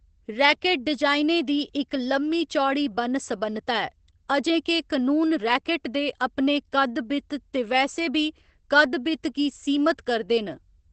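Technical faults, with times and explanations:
Throughout, Opus voice compression: nothing above 8.6 kHz, so speech sounds muffled with plainly audible coarse, slightly robotic texture, which fits SILK at around 12 kbps.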